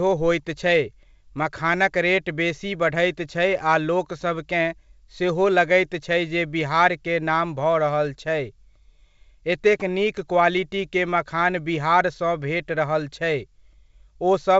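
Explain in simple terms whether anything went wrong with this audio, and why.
Nothing went wrong here: the speech just comes through the usual G.722 wideband telephone coding, which keeps things sounding a bit fuller than an ordinary phone call, and any trace it leaves is faint at most.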